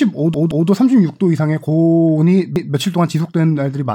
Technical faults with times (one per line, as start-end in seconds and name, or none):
0.34-0.68 repeated buffer
2.56-2.73 repeated buffer